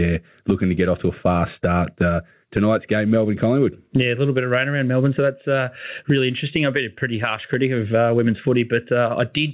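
Speech, carried over a narrowband call path that stops at 4 kHz, consistent with G.711 telephony, suffers gain pumping throughout. The gain swings by something like 15 dB, leaving loud and quiet passages squashed together. The likely cause is input gain set far too high, with a fast limiter or compressor clamping down on each loud sound. A noise gate would cut the gaps toward silence.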